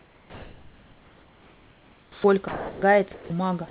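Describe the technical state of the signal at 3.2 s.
At 3.2 s the speech is replaced, from 3.14 to 3.30 s (160 ms), by steady comfort noise, likely sound dropped by the voice detector. The waveform flattens to a thin, even band. The spectrogram shows featureless hiss without harmonics until speech resumes.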